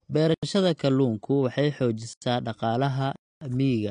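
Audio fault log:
Throughout: AAC compression. Nothing is present above 9.8 kHz, so the speech sounds dull and lacks air, and sibilants have a smeared, fizzy, warbling texture. This is likely low-bitrate AAC-LC coding, somewhere around 32 kbps. The encoder quantises each frame's spectrum against a hearing model, and at this rate it lowers the bandwidth ceiling and leaves coarsely coded or empty bands. Those gaps and the quantisation noise shift from frame to frame, which produces the audible swirl.
0.34–0.43 s, 2.13–2.22 s, 3.16–3.41 s: block of digital silence. The audio drops to silence and returns with no fade. The hole in between is clearly heard. The first two gaps each last about 85 ms, which fits a 4,096-sample buffer that was not filled in time. The third gap lasts 256 ms, long enough to sound like a dropout rather than a tick. Output samples were replaced by zeros wholesale.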